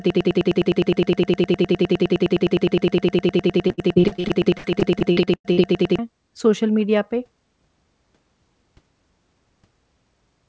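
A speech recording opens already stuck in a broken-record loop. From 0.0 s to about 5.99 s, a fragment of roughly 103 ms repeats exactly, back to back, 57 times, so whatever should have played there is lost. The likely cause is a player or stream that stalled and kept resending the last chunk it held. On a waveform this shows as one identical envelope tiled end to end. A spectrogram shows the same narrow slice of pattern stamped out like a comb of vertical stripes.

Inside that stretch, from 3.68 s to 5.68 s, repeated packet loss adds a choppy, robotic quality. Sixteen gaps, the longest about 96 ms, were patched by stretching the preceding sound, which covers about 30% of the span. The concealment filled 576 ms of the 600 ms that went missing. On a spectrogram the patches appear as smeared, flattened harmonics interrupted by brief breaks. The waveform shows abrupt level steps at the gap edges.

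Throughout, the audio carries the band limit of a wideband call path, consistent with G.722, with nothing above 8 kHz.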